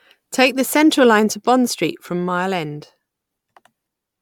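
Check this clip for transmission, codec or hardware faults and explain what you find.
One codec fault runs through the whole speech clip. Generation loss, throughout: likely repeated MP3 re-encoding, about five passes near 135 kbit/s, each adding fresh quantisation noise, giving swirly, hollow, smeared sound, blurred attacks, nothing above 19.9 kHz.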